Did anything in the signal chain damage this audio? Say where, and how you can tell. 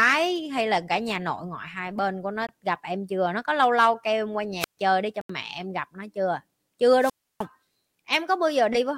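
Yes. Short holes at 2.47 to 2.49 s and 5.21 to 5.30 s point to a Bluetooth dropout at the wireless playback link. The audio cuts out for about 20 ms and then about 81 ms, and resumes further along, as if it had kept playing through the gap. The durations fit one lost packet and then about four. The likely cause is audio packets arriving too late at the headphones and being discarded, leaving silence until valid data returned.

A wireless microphone squelch dropout in the analogue radio stage ahead of capture shows at 4.60 to 4.77 s and 6.99 to 7.45 s. Each begins with a rise of hiss or static and then falls to near silence, muted for about 133 ms and then about 308 ms, before the speech returns. The FM signal from the transmitter faded until the receiver's squelch judged it too weak and shut the output off.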